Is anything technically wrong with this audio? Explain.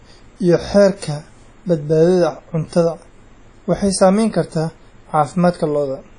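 Yes. WMA compression damage runs throughout the speech: smeared, ringing transients, a washy hiss that swells and fades with the signal, and nothing above 10.1 kHz. This is likely a transform codec spreading quantisation noise over long blocks and dropping weak components, which fits a low bitrate around 32 kbps.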